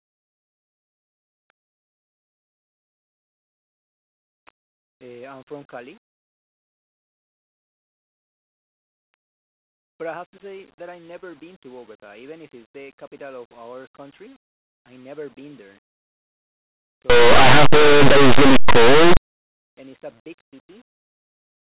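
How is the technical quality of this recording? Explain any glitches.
One stretch breaks down badly. From 17.10 to 19.17 s, just before "and it's a big", there is linear audio read as companded. Plain linear 8-bit samples are decoded as if they were mu-law codes, so values just to one side of zero become the largest outputs while those just on the other side stay small. The result is loud, harsh distortion.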